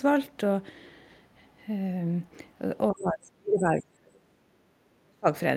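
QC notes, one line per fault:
2.91–4.20 s and 5.01–5.27 s, speech suppressed in double talk: the echo canceller likely could not tell the near talker apart from loudspeaker echo while both sides spoke at once, so it attenuated everything it heard. The voice sinks, by roughly 35 dB at its deepest across about a second and a half in the first stretch, and by roughly 30 dB in the brief second dip.
4.48–4.73 s, background gated by the echo canceller: with the loudspeaker active, the canceller clamped the microphone path down, taking the room sound with it. The ambience drops by about 13 dB for roughly a quarter of a second, then returns as soon as the canceller releases its hold on the microphone signal.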